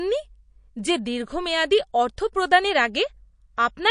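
From start to finish the speech carries plainly audible MP3 compression artefacts: dull top end, watery swirling on the s sounds, softened consonant attacks. That's likely an encoder starved of bits, which fits roughly 40 kbps, trimming treble and dropping weak detail frame by frame.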